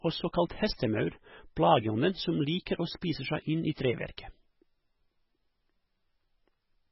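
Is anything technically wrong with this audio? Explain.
Yes, there are two faults.

The speech sounds watery and swirly throughout, with a hard ceiling on the treble: nothing is present above about 5.6 kHz, so sibilants lose their edge and sound metallic. This is most likely heavy MP3 compression at a very low bitrate, around 16 kbps. Starved of bits, the encoder cuts the top band at a fixed point and discards weaker frequency lines. Those lines drop in and out from frame to frame, which produces the shifting, underwater texture.

At 4.17 s, a sharp onset is preceded by a brief hiss, and the attack sounds softened and smeared rather than crisp. This is pre-echo. The codec spreads its quantisation noise across an entire block, and here the attack fell late in that block. Noise sized for the loud onset spilled about 10 ms into the quiet moment before it, where nothing masks it, so the hiss arrives ahead of the sound it belongs to.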